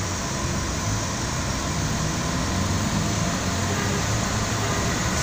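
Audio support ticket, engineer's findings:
Doubled audio track, present for the whole clip. Likely a second capture path running behind the first, or an edit holding two unaligned copies. A full-band duplicate trails the original by about one second at roughly equal level. No decay or room colour on the copy, so every event repeats cleanly a second later and the two layers overlap throughout.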